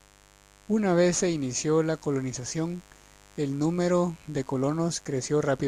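A mains buzz runs under the speech from start to finish. Interference tied to the 50 Hz supply has leaked into the signal path, most likely through a dimmer, a rectifier or a missing shield, which injects sharp switching spikes twice per cycle, so 100 times a second. Those spikes carry harmonics of 50 Hz up into the kilohertz range, producing a steady, raspy buzz that sits roughly 30 dB below the speech.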